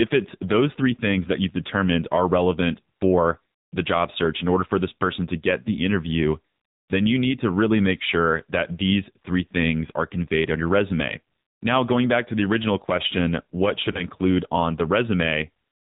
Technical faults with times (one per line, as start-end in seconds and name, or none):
0.00-15.91 AMR narrowband mobile codec
13.92-14.03 lost AMR speech frames